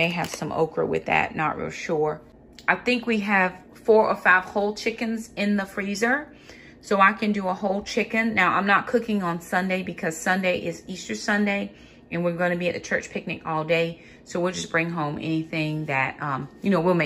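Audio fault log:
No faults are audible; the signal keeps unbroken continuity across the whole recording.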